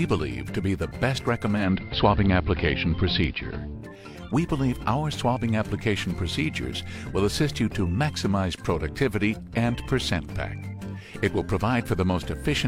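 Digital radio blending to analogue occurs from 1.52 s to 3.77 s. The receiver loses the digital stream and cross-fades over 0.19 s to the AM broadcast, shifting the level by about 3 dB and bringing up hiss roughly 35 dB below the audio.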